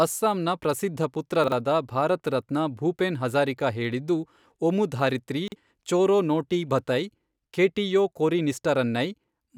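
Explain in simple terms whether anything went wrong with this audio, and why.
Chunks out of order at 1.44 to 1.52 s, just after "ಅಸ್ಸಾಂನ ಪ್ರಸಿದ್ಧ", and at 5.48 to 5.56 s, after "ಭೂಪೆನ್ ಹಜಾರಿಕಾ ಹೇಳಿದ್ದು ಒಮುಧಾರಿತ್ರಿ". Each time, a 40 ms piece of speech arrived one slot late and played after its neighbour. The sound is briefly jumbled.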